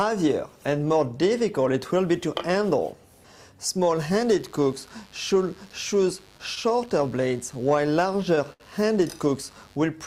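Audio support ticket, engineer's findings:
Mains buzz, 3.93–9.78 s: unshielded or switching source (dimmer/rectifier) injecting 50 Hz spikes; steady raspy buzz, harmonics into kilohertz range, around 30 dB below signal.

Repeated stalls (stutter), 6.37–8.62 s: late packets draining jitter buffer about a dozen times; last sound held, roughly 180 ms total, longest 70 ms; audio drags, nothing lost.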